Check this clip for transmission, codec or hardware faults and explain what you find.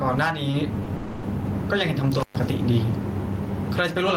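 Four faults are audible in this speech clip: gain pumping, two short stalls from late packets, a call audio freeze, and an intermittent contact.

Throughout, the level swings by around ten decibels, likely from excessive input gain driving a fast limiter.

At 0.51–0.55 s and 0.84–0.88 s, late packets emptied the jitter buffer; the receiver held the last sound about 20 ms each time, a brief smear.

From 0.96 to 1.25 s there is a call audio freeze. The receiver filled about 270 ms with a fading continuation of the last sound, probably while delayed packets were awaited. No silence results, and the audio resumes where it stopped.

From 2.20 to 2.36 s an intermittent contact opens for about 120 ms. The audio drops out with crackle at each edge.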